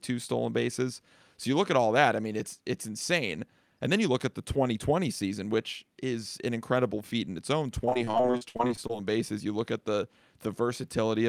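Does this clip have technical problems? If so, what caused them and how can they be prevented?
Yes: repeated packet loss (robotic sound) from 7.85 to 8.91 s, after "feat in its own": many short gaps up to 59 ms, each patched by repeating sound, giving choppy speech unlike a single clean dropout. A steadier network and a larger jitter buffer would prevent it.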